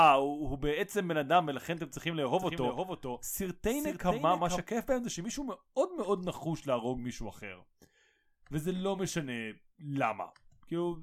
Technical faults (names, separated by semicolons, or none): doubled audio track